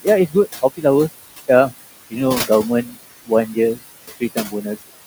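Noise suppressor artifacts run through the whole recording. The suppressor pulls the room noise, which sits about 13 dB below the speech, down by about 17 dB between phrases and lets it back up under the speech, so the background pumps.

Speech cut by the noise suppressor comes at 2.85 to 2.95 s, when the suppressor mistakes part of the speech for noise and dips it by up to about 8 dB for roughly a tenth of a second. It happens again at 4.2 to 4.66 s, where quieter portions adding up to around 150 ms drop by up to about 13 dB and sound swallowed.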